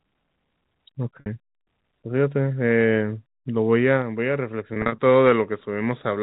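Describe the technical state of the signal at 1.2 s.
At 1.20 s there is packet loss with pitch repetition. A 60 ms gap, running to 1.26 s and consistent with three lost 20 ms packets, is bridged by looping the last pitch period while it fades over about 50 ms. It sounds like a brief buzzy hold dying away before the sound resumes with a short cross-fade. The waveform shows identical repeating cycles shrinking in amplitude, and the spectrogram shows frozen harmonic lines below the 4 kHz telephone ceiling.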